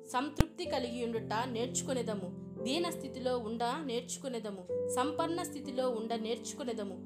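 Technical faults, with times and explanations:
0.41 s, invalid numbers at full scale: for about 2.9 ms a calculation produced infinite or invalid values, and the output was forced to the largest positive or negative sample value across the whole block, which fits a 128-sample processing block. The stretch is so brief that the jump up to that extreme value and the drop back merge into a single loud bang, and no sound from the signal survives within it.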